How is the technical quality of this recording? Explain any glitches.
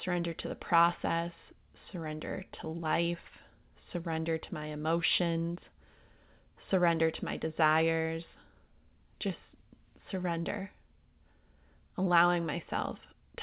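No glitches can be heard anywhere in this recording.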